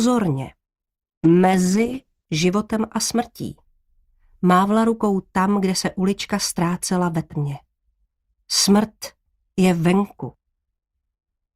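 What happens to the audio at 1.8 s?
At 1.8 s there's a call bitrate drop, from 1.25 to 2.31 s. The encoder falls from 48 to 12 kbps, so the sound turns coarse and muffled. A spectrogram shows the high frequencies cut away.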